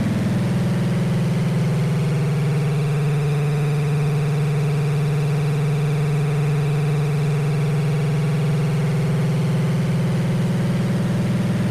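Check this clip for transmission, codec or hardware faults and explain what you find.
Nothing stood out on listening to this audio.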